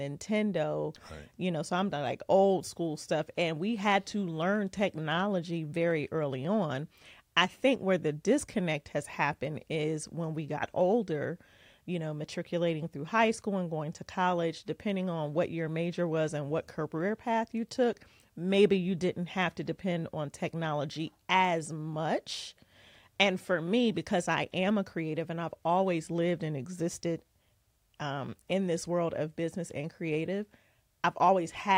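Two devices are likely running on separate, unsynchronised clocks that drift apart by around 700 ppm, so a single sample is dropped or repeated roughly every 30 ms. From 0.12 s to 31.76 s these clock slip clicks form a faint, steady rattle beneath the speech.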